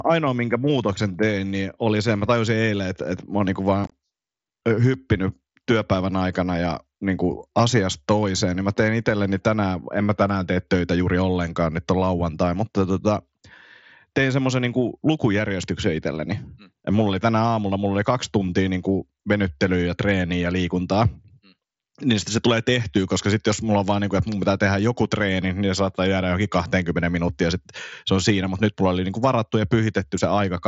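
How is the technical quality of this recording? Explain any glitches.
One glitch stands out in the speech, a brief burst of unconcealed Bluetooth headset packet loss between 3.84 and 3.92 s. The audio runs over the wideband mSBC headset link, which passes speech up to 8 kHz.

In that 75 ms stretch, about 45 ms of audio is missing in scattered holes, the longest about 22.5 ms. The holes fit six lost 7.5 ms mSBC packets between headset and phone. Each was replaced with silence or an idle pattern rather than repaired, so the voice sounds chopped and rough, with hard edges to the holes. Concealed loss would smear over the gaps instead. Because this link is mSBC rather than CVSD, the speech does not come back briefly quieter after the gaps.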